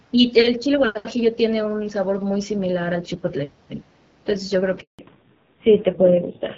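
A handover gap in this speech clip runs from 4.81 to 4.99 s: the voice fades out within a few tens of milliseconds and stays silent for 180 ms while the call switches networks, because no speech frames arrived during the changeover. A fallback to narrowband follows from 4.99 s to the end. Everything above 4 kHz disappears, and the voice sounds duller and rougher than the clear HD Voice wideband audio before the gap. That roughness points to a low-rate narrowband codec, about 5.9 kbit/s.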